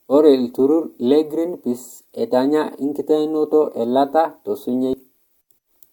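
Speech recording; no technical faults can be heard.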